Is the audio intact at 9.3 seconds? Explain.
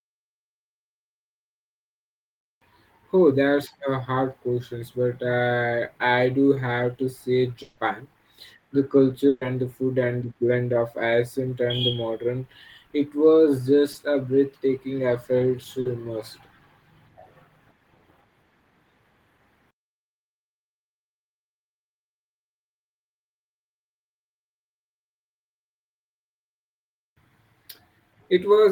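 No, a burst of packet loss hits from 9.28 to 9.42 s. About 130 ms of audio never arrived, so the receiver stretched the last sound across the gap, fading it down, before resuming at "and the food and" with that stretch of speech missing.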